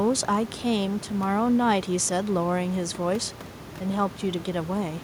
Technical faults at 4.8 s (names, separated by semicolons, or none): none